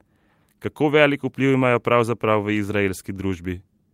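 No technical faults can be heard at any point in the speech.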